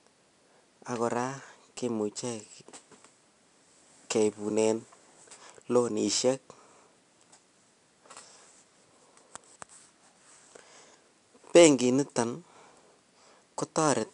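Speech clip with 4-bit ADPCM compression throughout. Each sample is coded as a coarse step from a prediction, leaving a gritty hiss that rises with loud syllables and distortion on sharp onsets. Nothing reaches above 10.7 kHz, pointing to a sample rate near 22 kHz and roughly 89 kbps.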